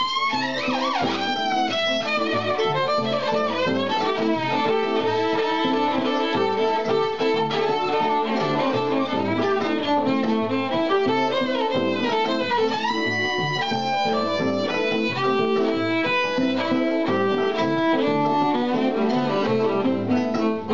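No faults are audible anywhere in the audio; nothing to flag.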